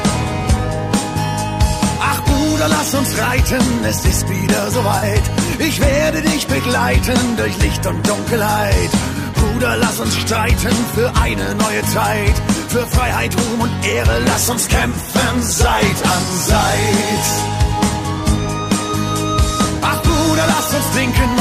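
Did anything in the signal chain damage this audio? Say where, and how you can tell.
Yes. AAC frame loss with concealment at 4.97 to 5.03 s: a 43 ms smeared patch where the decoder rebuilt the missing codec data, likely two frames, from the last good spectrum.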